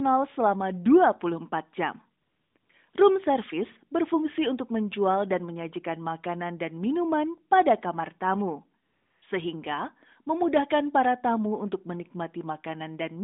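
The sending phone decided the line was silent and stopped transmitting speech frames, so the receiver filled the gap with AMR comfort noise synthesised from a rough level and spectrum estimate. Steady, smooth hiss replaces the real background from 2.22 to 2.56 s, 2.58 to 2.70 s and 2.90 to 2.94 s, switching in and out, and again from 8.84 to 9.22 s just after "minuman pada kamar tamu", all within the narrowband 200 Hz to 3.7 kHz line.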